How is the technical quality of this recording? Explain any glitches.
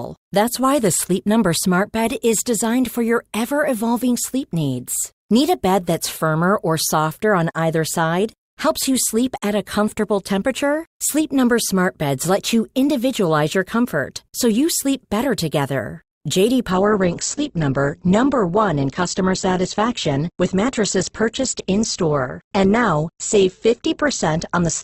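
There's one glitch, a drop in quality from 16.71 s to the end at 24.84 s. That's an adaptive stream at a lower bitrate: the connection slowed, so the player switched to a leaner version of the stream without a gap. Everything above 8.2 kHz vanishes and the speech turns dull, with more codec smearing, which fits a fall from around 64 kbit/s Opus to about 12 kbit/s.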